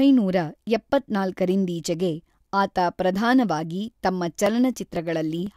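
From 4.46 s to 5.47 s, the speech carries periodic USB or driver dropouts. Every half second, a tiny slice of audio, around a millisecond, is skipped outright. Something is briefly blocking the audio path. About three evenly spaced ticks result.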